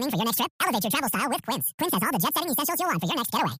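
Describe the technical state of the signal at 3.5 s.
Wrong sample rate, present at 3.5 s and throughout the clip. The samples are being played back about twice as fast as they were captured, which fits audio recorded near 22 kHz being played at 44.1 kHz without conversion. Speech therefore runs at double speed and sits a full octave, 12 semitones, higher, sounding squeaky and rushed.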